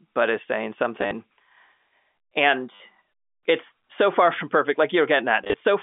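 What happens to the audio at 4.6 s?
Nothing goes wrong at 4.6 s: the speech carries on intact through the narrow telephone band of G.711 coding, with no dropout, click or distortion at that moment.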